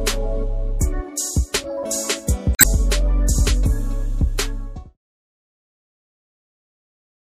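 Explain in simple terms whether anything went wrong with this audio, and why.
The audio was most likely squeezed by MP3 compression. To save space, the encoder kept only the parts of the sound it judged most important and threw away fine detail, including much of the treble. Here that damage is plainly audible through the whole clip: the sound has a watery, swirly quality, high frequencies are dulled, and sharp beginnings of sounds are smeared rather than crisp.

Separately, part of the compressed data was damaged between 2.52 and 2.66 seconds. Some of the stored information there was wrong or missing, so the decoder couldn't read those frames properly and had to hunt for the next clean point to pick up again. What you hear is a short glitch, a brief chirp, squawk, click or short hole lasting a little over a tenth of a second, as the playback stumbles and recovers. The smooth fade-out that starts around 4.5 seconds and finishes at 4.97 seconds is an intended edit, not a fault.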